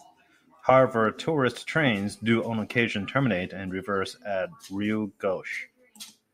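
No technical fault can be heard anywhere in the recording; the signal stays intact and continuous for its whole duration.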